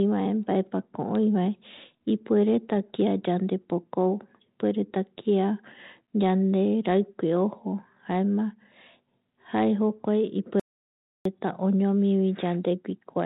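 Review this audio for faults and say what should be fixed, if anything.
An audio dropout to silence runs from 10.60 s to 11.25 s, cutting out about 0.66 s of speech. The waveform drops to a flat, silent line and the spectrogram shows a blank vertical band with no room tone. The input was likely lost, through a disconnected device, failed link or accidental mute, while the recorder kept writing silence. The 32 kbit/s G.726 path shows only light codec damage and its expected empty region above 4 kHz. Securing connections and monitoring input levels during capture would prevent the gap.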